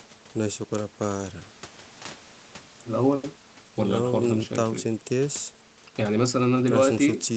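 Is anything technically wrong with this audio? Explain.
No, nothing's wrong here: it's speech that has gone through ordinary call processing, so the top end stops at around 8 kHz as you'd expect from a wideband call, and that's just how calls sound rather than a problem.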